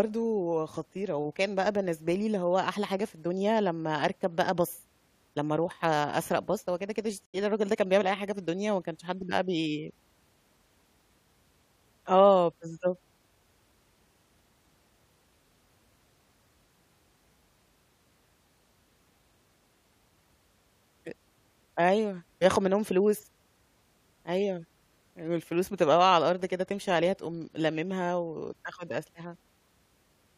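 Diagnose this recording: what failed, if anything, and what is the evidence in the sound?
Stream reconnect, 7.26 to 7.35 s: a network dropout leaves 80 ms of silence, then a fresh decoder resumes the speech roughly 70 ms further on.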